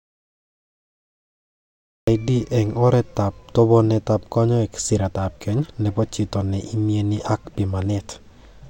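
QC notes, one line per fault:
0.00–2.08 s, audio dropout to silence: input was likely lost and silence recorded, so the clip opens in dead silence, no room tone, until "eng' oretab tobenetab kanyoik".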